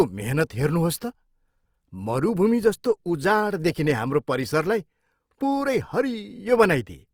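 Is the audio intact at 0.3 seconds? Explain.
No. Opus compression runs through the whole clip, including 0.3 s. Likely low-bitrate CELT coding, around 24 kbps, fills starved bands with folded or noise content, making the speech grainy and rough.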